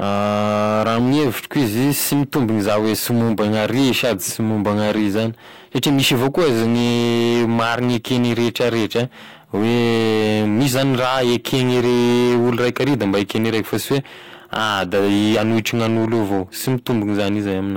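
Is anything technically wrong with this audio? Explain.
Yes. Across the whole speech clip, every louder syllable carries a harsh, buzzy fuzz, with a gritty crackle riding on the peaks. This is hard clipping: the signal was driven about 12 dB beyond what some stage in the chain could pass, so its peaks were sliced off flat. With roughly a seventh of the samples hitting that ceiling, the squared-off tops add harmonics high up the spectrum, which gives the distortion its steady, edgy character.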